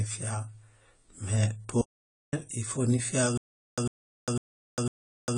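From start to finish the speech sounds dull and smeared, with nothing above 10 kHz and a warbling, fizzy edge on sibilants and held sounds. This is AAC compression, likely AAC-LC at a low rate that fits about 24 kbps. With so few bits, the encoder lowers its cut-off, quantises the remaining frequency lines coarsely, and leaves gaps or substitute noise in the spectrum, which gives the audible codec damage.

At 1.81 s the speech cuts off abruptly into complete digital silence, with no room tone, and resumes mid-flow at 2.33 s. This is an audio dropout to silence lasting about 515 ms. The likely cause is that the input was briefly lost, through a disconnection, a failed link or a mute, while recording carried on writing silence. Whatever was spoken during that half-second is simply gone.

From 3.38 s to the end, a single 100 ms burst of sound repeats four times. Each burst is followed by 401 ms of dead silence, so it returns every 501 ms in an even, mechanical pulse. 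This is a stutter with silent gaps. The likely cause is a stalled player or stream that replays its last fragment on each retry and then runs empty. The speech that should fill those final two seconds never arrives.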